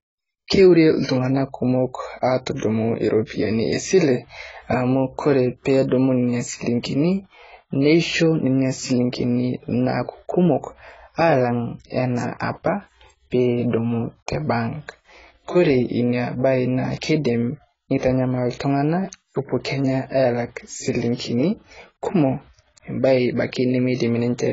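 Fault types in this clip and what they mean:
AAC compression: The speech was likely squeezed through an AAC-LC encoder at a very low bitrate, one that fits roughly 16 kbps, so the coder discards detail heavily. Nothing remains above 7.7 kHz, leaving the speech dull and smeared, with a warbling, fizzy texture on sibilants.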